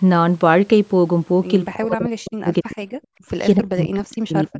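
A speech recording in which the talker's level plunges by roughly 40 dB from 1.71 to 2.85 s and again from 3.56 s to the end, likely speech suppressed in double talk by an echo canceller. Between 3.13 and 3.27 s the background drops out by about 40 dB, gated by the echo canceller while its loudspeaker played. The call microphone processing leaves nothing above 8 kHz.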